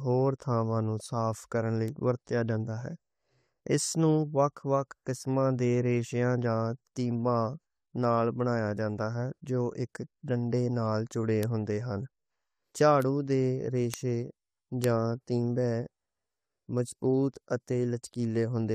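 At 1.88, 11.43, 13.02, 13.94 and 14.84 s the speech carries a bit error spike: a flipped bit throws one sample, or two at 13.94 and 14.84 s, off by a power of two before it snaps back. Each is a single sharp, broadband tick with no relation to the speech. Unlike a splice or dropout click, there is no gap or step in the waveform, just the instantaneous jump and return.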